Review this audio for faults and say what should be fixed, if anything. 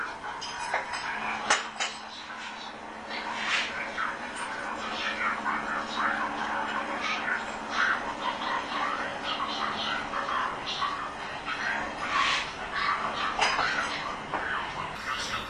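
Wrong sample rate from 0.0 to 14.95 s. Everything runs at 0.73 times speed and about 5.5 semitones low. This fits 44.1 kHz audio played at 32 kHz. Fix it by resampling to the output rate, or by playing at the recorded rate.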